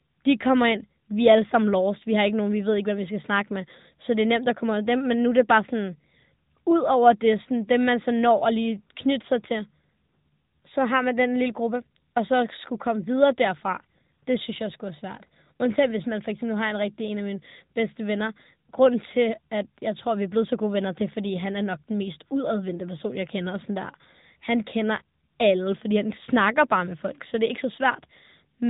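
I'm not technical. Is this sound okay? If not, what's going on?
No. The speech went through the AMR narrowband mobile codec, the system older mobile phone networks use to squeeze voices down to a trickle of data. It rebuilds the voice from a simple model of the throat and mouth instead of sending the real sound, and it throws away everything above about 3.8 kHz. Across the whole clip, the voice sounds muffled and phone-like, with a plainly audible buzzy, artificial edge.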